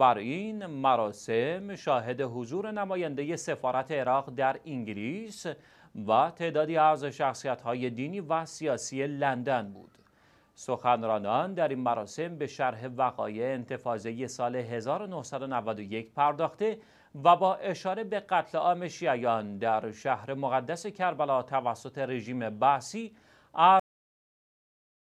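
At 23.8 s the audio has a cut-off end. The sound stops abruptly mid-event, with no decay. The final buffers were never written or played out. Digital silence follows and runs to the end, about 1.35 s later.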